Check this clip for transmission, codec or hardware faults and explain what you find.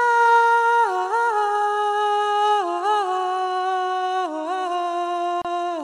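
One fault is audible.

Gap at a join of encoded pieces, 5.42 to 5.45 s: untrimmed encoder delay and padding leave a 31 ms silence, its edges smeared, before the sound continues.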